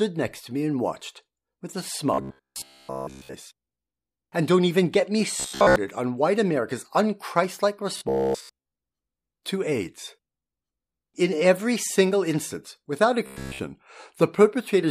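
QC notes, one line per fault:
2.14–3.34 s (after "and watched with a"), 5.40–5.76 s (after "don't even get me"), 7.97–8.72 s, 13.26–13.61 s: robotic sound from repeated short buffers. A rigid metallic buzz at 66.7 Hz follows the speech only roughly, likely from a 15 ms buffer being looped while new audio was skipped. The waveform shows repeating 15 ms cycles, and the spectrogram shows a fixed comb of harmonics spaced 66.7 Hz apart.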